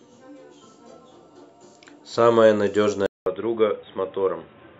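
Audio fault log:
3.06–4.79 s: input switched to a poorer device, likely; a 200 ms gap, then nothing above 3.8 kHz, roughly 5 dB quieter with faint new background noise, unlike a plain filter.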